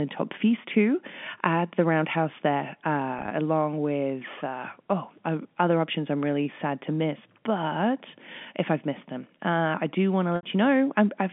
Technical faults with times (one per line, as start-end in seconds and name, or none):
3.19-3.31 packet loss with pitch repetition
10.36-10.43 packet loss with pitch repetition